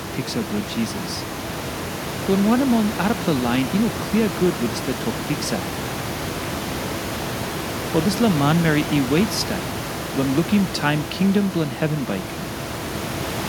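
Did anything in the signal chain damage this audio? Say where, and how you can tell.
No, nothing in the signal chain damaged this audio.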